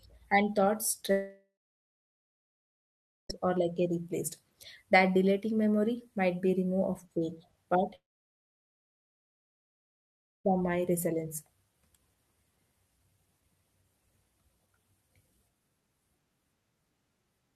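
Speech clip where the sound fades into a brief buzz and then about 1.8 s of silence from 1.11 to 3.31 s, and again goes nearly silent from 7.95 to 10.46 s, resuming with roughly 2.2 s and 2.5 s missing, likely long network dropouts.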